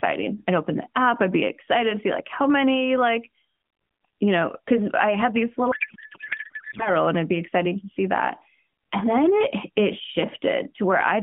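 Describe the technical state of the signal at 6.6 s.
At 6.6 s there is a codec payload misread (5.72–6.89 s, between "because I had these" and "and it'd be exciting"). The AMR frames fit being octet-aligned but unpacked as bandwidth-efficient, so the bit fields are misplaced. The result is continuous garbled warble that barely tracks the speech, not the gaps or smoothed repeats of lost packets.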